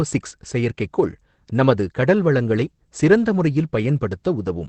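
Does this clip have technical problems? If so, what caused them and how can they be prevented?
Yes. Opus voice compression runs through the whole speech clip. Nothing is heard above about 8.5 kHz, and the speech sounds plainly hoarse, muffled and slightly robotic. That points to SILK wideband coding with a coarsely coded excitation, at a rate that fits about 12 kbps. A simple low-pass filter would dull the top end in the same way but leave no grainy, synthetic rasp in the voice itself. Encoding at a higher Opus bitrate, around 24 kbps or more for speech, prevents it.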